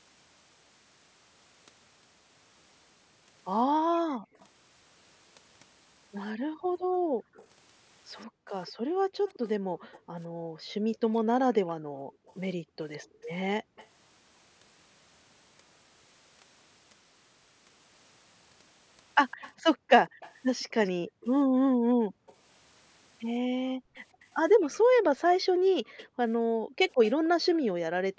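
From 3.7 to 4.34 s, 6.35 to 13.76 s and 19.76 s to the end, background gated by the echo canceller pulls the microphone down by up to about 40 dB, so the room sound repeatedly dips out. An echo leak, likely from a loudspeaker, sends back a 163 ms delayed copy at 4.34 to 4.46 s, 6.78 to 10.0 s, 11.7 to 13.87 s, 19.31 to 22.34 s and 23.95 to 27.28 s. The copy starts faint and grows to about 20 dB below the speech.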